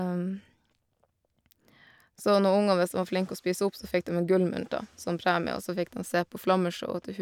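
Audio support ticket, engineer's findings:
Listened through the full speech clip; nothing stood out, no symptoms to log.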